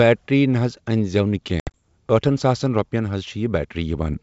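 Packet loss on an ADPCM call breaks into this speech clip between 1.60 and 1.83 s: about 100 ms of audio drops out, scattered over 140 ms in several hard-edged silent holes, the longest about 70 ms, which points to something like ten lost packets. Each gap leaves the receiving decoder's adaptive predictor and step size out of step with the sender's, so the speech comes back slightly distorted before settling. Elsewhere the G.722 wideband coding carries speech clearly up to 7 kHz.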